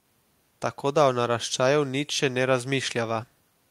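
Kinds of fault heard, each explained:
Nothing wrong turns up anywhere in this bit of speech, so there's no fault to list here.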